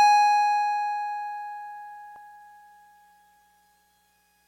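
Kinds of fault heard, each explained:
Overlap between stream segments: two consecutive music segments carried overlapping time stamps, so the player trimmed roughly 6 ms that was never actually duplicated. The waveform jumps at 2.16 s, heard as a brief click or skip, consistent with a segment boundary every 2 s.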